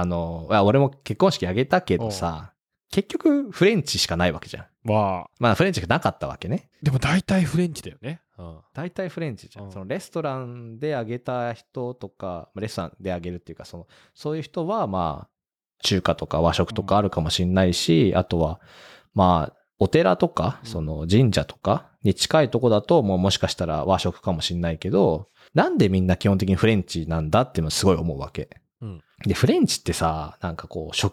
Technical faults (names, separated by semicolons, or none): zipper noise